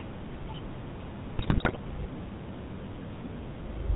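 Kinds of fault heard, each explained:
GSM full-rate codec: The speech has been squeezed through the original GSM coder, which models the vocal tract as a filter and drives it with a sparse train of regularly spaced pulses, keeping only a third of the excitation samples. The sound is consistent with its 13 kbps rate. Nothing survives above 4 kHz, so the speech sounds dull and boxy, and the coarse pulse excitation gives it a plainly audible buzzy, gravelly roughness throughout.
GSM bit errors: From 1.38 to 1.77 s the decoder received corrupted frames, as on a weak radio link, so flipped bits landed in the filter, pitch and gain parameters. Each damaged frame is rebuilt with a wrongly shaped spectrum or a wrong level. For that stretch of about 0.4 s the speech breaks into squawks, pops and gargling. The density of the disturbance points to a fairly heavy error rate hitting most frames in that window.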